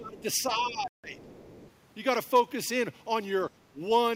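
Speech suppressed in double talk opens the clip, from 0.00 to 0.26 s. The speech sinks by roughly 25 dB for about a third of a second, likely because an echo canceller heard both sides at once and turned everything down rather than risk passing echo. Inside that stretch, at 0.18 to 0.23 s, the other side's voice leaks through, a faint scrap sitting about 30 dB under the talker, likely residual loudspeaker echo the canceller failed to remove.

The speech is suppressed in double talk again from 0.50 to 1.28 s, dipping by about 15 dB for around half a second in total. The cause is likely the same collision of both talkers. Leakage of the other side's voice returns within it at 0.61 to 0.70 s, again about 30 dB down.

A Bluetooth stall cuts the sound to complete silence for 157 ms, from 0.88 to 1.04 s, before it resumes. That gap likely comes from interference delaying packets until the headset's buffer ran empty.

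The other side's voice leaks through once more from 1.22 to 1.71 s, now louder at about 25 dB below the speech, a half-second trace of echo. A last, brief suppression at 3.72 to 3.81 s pulls the speech down by about 15 dB for roughly a tenth of a second.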